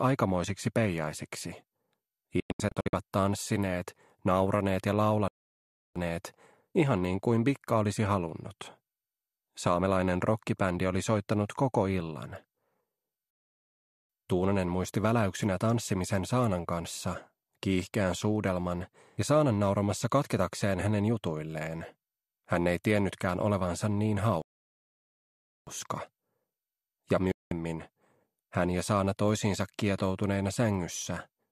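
At 2.40 s the audio breaks up in a digital broadcast dropout. Between 2.40 and 2.94 s the sound is punched with several short holes, adding up to about 312 ms of silence. The longest hole is 96 ms. Each cut fades out in about 3 ms, so the gaps are abrupt but not clicky. The receiver muted on frames it could not decode, and their content is gone. The hole pattern fits roughly 24 ms frames.

At 5.28 s the sound stops dead for 0.68 s. This is a playback stall. The player most likely ran short of data or was briefly blocked, and it went silent until it recovered. There is a second stall at 13.31 s lasting 0.79 s. The longest comes at 24.42 s and lasts 1.25 s. Each one is a single clean gap in mid-flow.

A second digital broadcast dropout mutes the audio from 27.32 to 27.52 s. This time it is one solid hole of 192 ms, with the same quick fade of about 3 ms. The span fits about eight lost frames.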